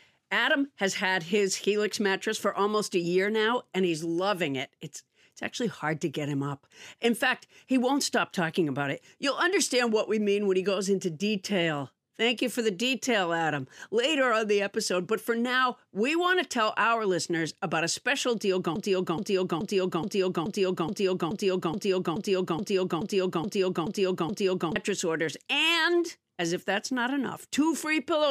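A speech recording with a broken-record loop from 18.76 s to 24.76 s. A 0.43 s fragment repeats exactly, back to back, 14 times over six seconds. The speech that belonged there is lost. The cause is likely a stalled player, encoder or stream.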